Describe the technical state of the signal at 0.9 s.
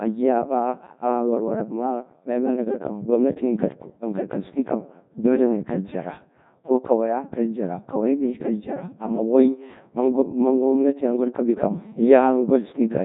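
Codec 2 vocoder coding is present at 0.9 s, as it is across the whole clip. The decoder does not carry the original waveform. It rebuilds the speech from sine waves driven by pitch, voicing, energy and a coarse spectral envelope. The damage is heavy: the speech comes out robotic and buzzy, which fits a very low rate near 1.2 kbit/s. Nothing is left above 3.8 kHz.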